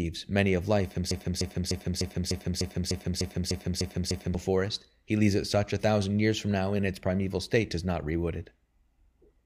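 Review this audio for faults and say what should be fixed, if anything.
A broken-record loop runs from 1.11 to 4.35 s, right after "many of life" and before "forest he leaves it". A 300 ms fragment of speech repeats exactly, back to back, 11 times. The speech that belonged in those three seconds is gone. The likely cause is a stalled player, encoder or stream that kept resending the last fragment it held. To prevent it, detect stalls and output silence or resynchronise instead of repeating buffered audio.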